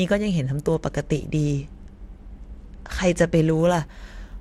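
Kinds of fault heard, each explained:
Bluetooth SBC bit pool drop: from 0.44 to 3.61 s the speech loses its treble and takes on a gritty quantisation noise, which fits the bit pool falling from 28 to 13, near 102 kbps. Grit plus dullness, without dropouts or clean filtering, separates it from packet loss.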